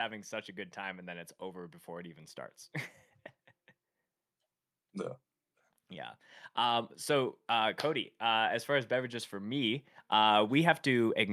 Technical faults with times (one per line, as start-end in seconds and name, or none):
6.56-11.32 automatic gain rising